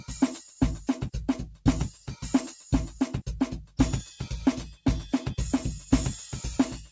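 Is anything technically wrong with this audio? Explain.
Yes. Between 1.92 and 2.08 s, the noise suppressor mistook part of the sound for background noise and pulled it down, a case of sound cut by the noise suppressor. For roughly 150 ms the level sinks by up to about 7 dB, so the affected passage briefly dips. The clip also runs through a call path whose band ending at 8 kHz fits a G.722 codec.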